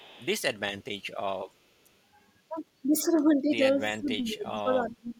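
A speech recording opens with an echo leak from 0.0 to 0.26 s: a faint delayed copy of the voice, roughly 30 dB below the speech and trailing by about 358 ms. This is likely a far-end loudspeaker echo that the echo canceller failed to fully remove before sending it back. Later, the talker's level shows speech suppressed in double talk, with a brief, slight dip between 3.55 and 3.62 s and then a much deeper cut of around 20 dB from 3.88 s to the end. The likely cause is the echo canceller turning down the talker while the other side spoke at the same time.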